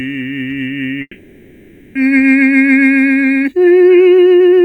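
At 1.01 s the music breaks off and, until 1.97 s, is replaced by a continuation of its last moment: a buzzing, hiss-like tail that fades away, with roughly 40 ms of silence at the end before the music resumes. That points to a long network dropout, with the receiver likely filling about 940 ms of lost audio. Unlike a brief packet-loss glitch, the gap is close to a second, and the music returns further along rather than picking up where it stopped.

From 2.07 s to the end, the music suddenly runs about 1.55 times faster while its pitch stays put. The result sounds choppy and rushed, with short fragments seemingly dropped to squeeze the material into less time. This is a time-stretched section, most likely compression to fit a target length. What separates it from a simple playback-speed error is the pitch: speeding up a recording raises its pitch, but here the pitch holds steady and only the pace jumps.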